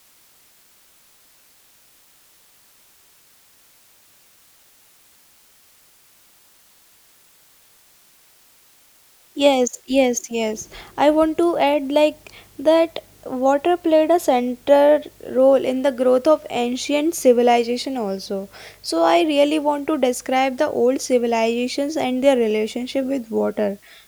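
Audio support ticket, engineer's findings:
Constant even hiss under the speech, start to end. Low bit depth with dither: noise added before coarse rounding turns quantisation error into steady white noise, about 35 dB below signal, consistent with roughly 9-bit output. Spectrogram: flat broadband floor, no harmonics. Waveform: visible fuzz in pauses.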